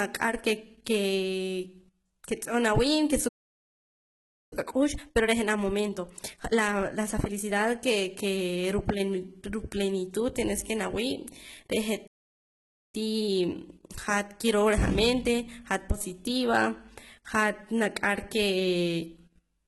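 Throughout, the speech has a gritty, metallic top end, and s sounds come out lispy. This is likely HE-AAC compression at a low bitrate, around 16 kbps. The treble is rebuilt from lower bands rather than simply cut off, which is why it sounds synthetic rather than dull.

At 3.28 s, just after "nawii' ke", the sound stops dead for about 1.23 s until 4.53 s. This is a playback stall, likely the player running out of data.

From 4.53 to 7.53 s comes time-compressed catch-up: speech hurried to 1.25× at normal pitch, from spliced, cross-faded pieces. Because the pitch stays put, it is not a resampling speed-up.

A second playback stall, likely from the same starved buffer, silences the audio from 12.07 to 12.95 s, about 0.86 s. Milder catch-up at 1.1× follows until 15.95 s.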